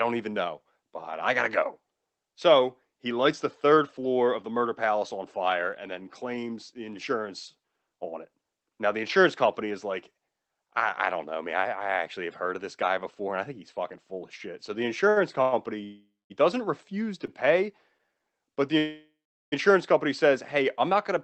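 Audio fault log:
15.09 to 15.18 s and 17.26 to 17.30 s, short stall from a late packet: a packet arrived after it was due and the jitter buffer ran dry, so the receiver held the last sound for about 66 ms and then about 19 ms until it caught up. Nothing is lost, but a sound lingers too long with a faint buzzy hold.
15.42 to 15.54 s, 15.84 to 16.32 s and 18.78 to 19.54 s, call audio freeze: packets were likely held up in transit, emptying the jitter buffer, and the receiver carried the last sound forward as a fading buzz. The first gap, about 100 ms, stays filled throughout; the second, about 0.46 s, decays into roughly 0.21 s of silence; the third, about 0.74 s, ends in roughly 0.41 s of silence. Each time the audio resumes exactly where it stopped, so time is inserted rather than removed.
18.02 to 18.20 s, jitter buffer slow-down: with its reserve running low or its target delay just raised, the receiver repeated single pitch periods and slivers of pause to rebuild it, adding about 44 ms. 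The audio plays at about 81% speed while the pitch stays put, so sounds are drawn out and may carry a slight warble.
The call path itself, Opus at 20 kbps with an 8 kHz bandwidth, leaves its usual band limit and coding noise across the clip.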